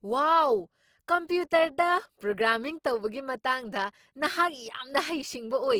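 Low-bitrate Opus compression, likely in its music-oriented CELT mode at a rate that fits around 16 kbps, runs for the whole clip. Starved bands are filled with folded or noise content, so the speech sounds rough and grainy, while detail still reaches about 20.2 kHz.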